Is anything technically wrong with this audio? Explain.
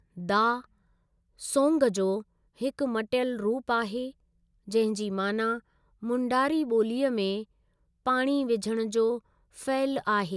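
No, nothing technical stands out here; it's just the speech as recorded, with nothing getting in its way.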